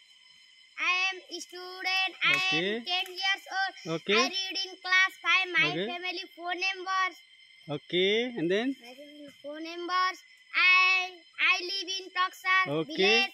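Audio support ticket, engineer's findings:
Crude rate conversion, whole clip. Gritty, inharmonic fizz riding loud and bright passages, roughly 35 dB below the signal. Linear interpolation with no anti-alias filter, consistent with a 44.1 kHz to 48 kHz resampler. Error folds back as unrelated tones.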